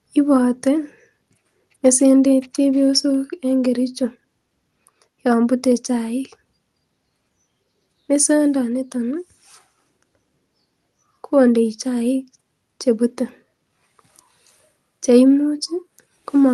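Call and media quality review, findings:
No faults found in the speech; the call path carries it with ordinary coding texture and a top end that stops around 12 kHz, which fits an Opus-class call codec running near 32 kbps.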